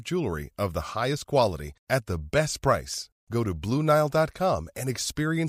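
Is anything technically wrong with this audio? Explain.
No, nothing in this speech recording stood out as technically wrong on listening.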